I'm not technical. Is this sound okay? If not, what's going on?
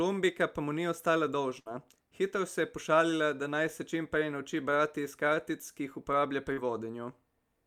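No. At 1.59 to 1.68 s the speech briefly freezes into a fading held sound, then jumps ahead. This is a burst of packet loss: about 60 ms never arrived and was patched over. At 6.54 to 6.59 s there's a quick smear. This is short concealed packet loss, where about 40 ms went missing and the receiver guessed the gap.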